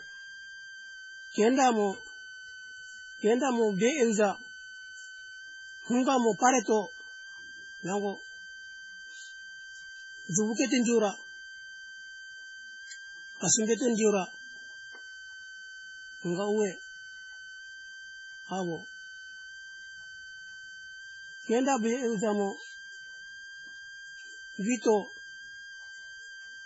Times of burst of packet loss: none

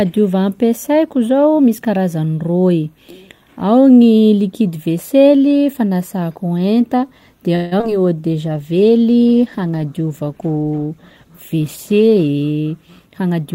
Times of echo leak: none

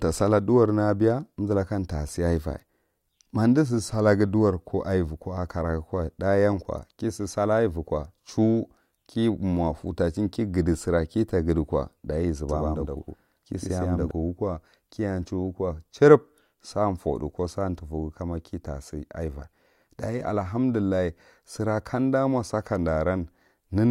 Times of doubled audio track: 12.49-14.11

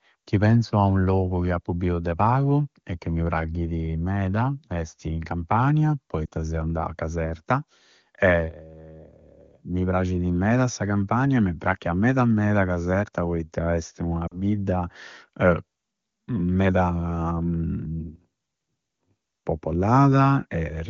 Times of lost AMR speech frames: 6.26-6.29, 14.27-14.40

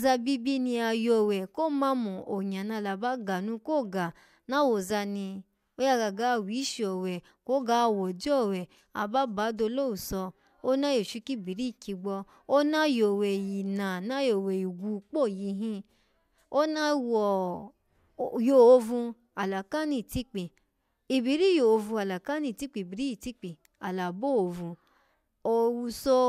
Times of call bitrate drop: none

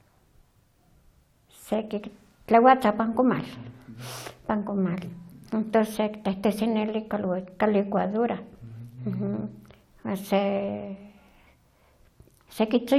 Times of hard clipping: none

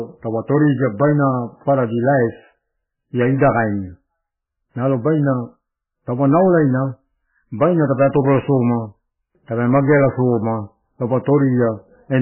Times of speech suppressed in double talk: none

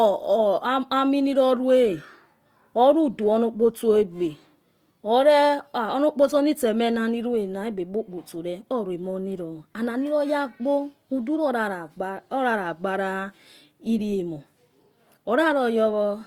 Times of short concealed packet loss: none

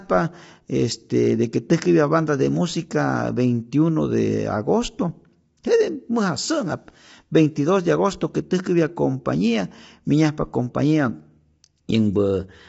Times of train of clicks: none

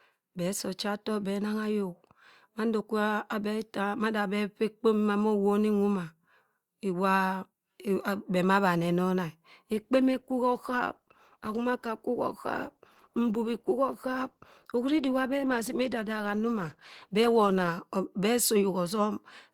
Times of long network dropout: none

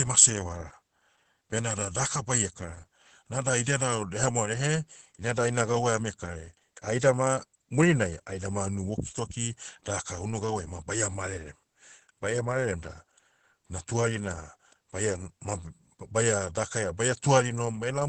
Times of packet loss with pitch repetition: none

